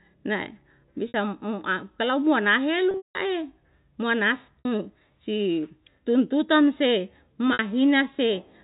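Packet loss with pitch repetition at 1.08, 2.91, 4.59 and 7.53 s: the receiver repeats the last pitch period through each gap, 60 ms at 1.08, 4.59 and 7.53 s, giving a brief buzzy hold. At 2.91 to 3.15 s, 210 ms of losses spread over 240 ms, including a 180 ms run, fade into silence before the speech cross-fades back, all within narrowband G.711 telephone coding.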